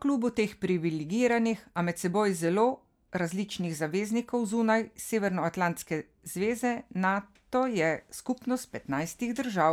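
A speech recording with no technical faults to report.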